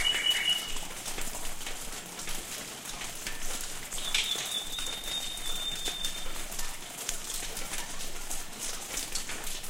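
No technical faults are audible.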